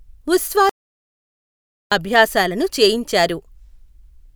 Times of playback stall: 0.69-1.92

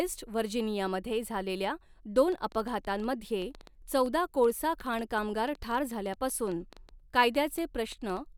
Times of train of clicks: 2.18-8.18

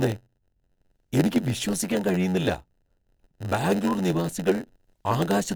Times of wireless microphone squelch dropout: none

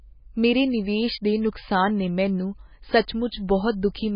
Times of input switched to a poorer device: none

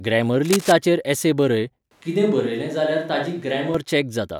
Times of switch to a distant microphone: 1.91-3.74

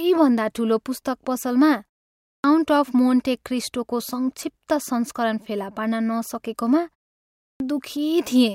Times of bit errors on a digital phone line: none

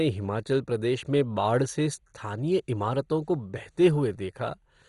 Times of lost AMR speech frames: none

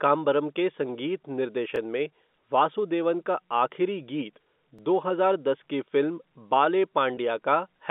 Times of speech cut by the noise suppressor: none

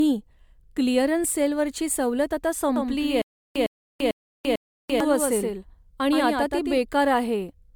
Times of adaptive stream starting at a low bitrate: none

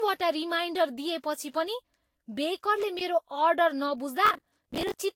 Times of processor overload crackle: 4.26-4.94

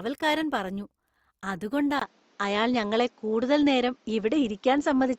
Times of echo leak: none

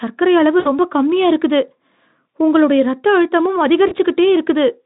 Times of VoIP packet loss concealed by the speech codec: 0.59-0.69, 3.87-3.97

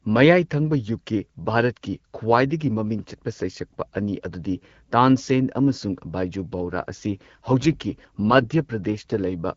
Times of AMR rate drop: 6.63-9.24

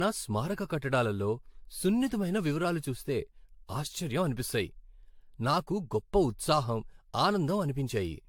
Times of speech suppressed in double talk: none

